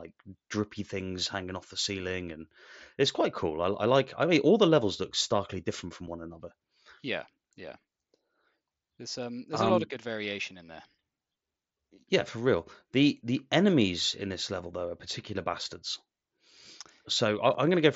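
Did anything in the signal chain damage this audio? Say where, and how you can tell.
Yes. Unconcealed Bluetooth headset packet loss on the headset-to-phone radio link: at 6.06 s and 17.54 s the speech drops out for 7.5 ms, fitting one lost packet each, with nothing filled in. The waveform shows brief gaps with abrupt edges, and the spectrogram shows thin vertical breaks through the mSBC band up to 8 kHz.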